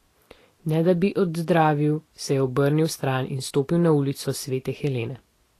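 Vorbis compression runs throughout this speech clip, likely from an encode near 35 kbps: nothing survives above 14.1 kHz, and coarsely quantised treble becomes hissy grain.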